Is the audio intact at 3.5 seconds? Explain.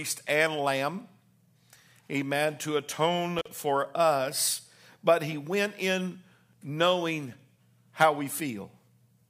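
No. An intermittent contact runs from 3.39 to 3.48 s, ending just before "for us". A loose connection briefly opens the line for about 42 ms, so the speech cuts out with crackle at both edges and faint hiss between.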